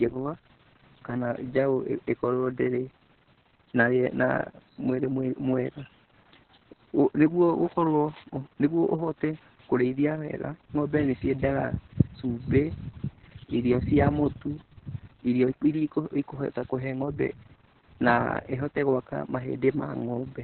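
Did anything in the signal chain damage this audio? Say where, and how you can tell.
Yes. The damage comes from the codec stage and lasts the whole clip. This is Opus voice compression at a very low rate. The speech is muffled, with nothing above about 4 kHz, so the coder has fallen back to narrowband SILK. Voices also sound hoarse and slightly robotic. That happens because the linear-prediction excitation is quantised very coarsely. The damage is heavy and fits a bitrate of about 6 kbps.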